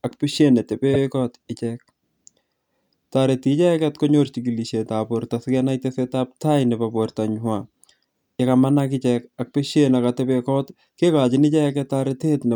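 At 0.93 s the speech stutters. A short stretch, from 0.93 to 1.01 s, plays twice in a row. This is a repeated frames fault. A run of compressed audio was stored or delivered a second time, so the decoder played the same segment again. The repeated block is 78.4 ms long, which fits a run of about three codec frames. It plays once extra, so it adds 78.4 ms to the clip. It is heard as a brief hiccup.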